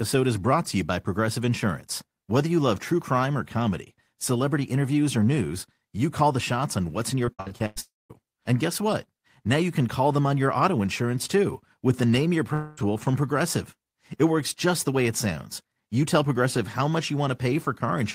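It's a speech clip, and from 7.25 to 7.78 s it turns choppy and robotic. That's repeated packet loss: six gaps in about half a second, the longest about 100 ms, with roughly half the stretch patched by stretching the last bit of sound. Right after, from 7.80 to 8.12 s, the audio smears into a fading buzz and then about 200 ms of silence. At 12.54 to 12.82 s there's a similar smeared patch lasting about 0.23 s, with no silence. Both are likely long network dropouts, with about 0.3 s and 0.24 s of real audio simply gone.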